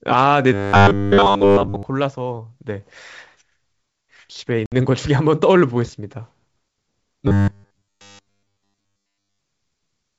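From 0.53 to 1.83 s, new audio likely arrives too seldom, so the playback repeats a short buffer, about 10 ms long given the 100 Hz buzz, for most of that stretch. The result is robotic sound from repeated short buffers: the speech becomes a rigid, metallic drone pinned at 100 Hz that only roughly tracks the syllables.

From 4.66 to 4.73 s, packet loss on an ADPCM call drops a few packets, about 60 ms of audio, and fills the gap with silence. The decoder's predictor and step size lose track of the sender's, so the hard-edged gap is followed by slightly distorted speech before it settles.

From 7.28 to 9.39 s, the same buffer repetition likely returns and covers the whole stretch. The speech is again replaced by the fixed 100 Hz metallic buzz.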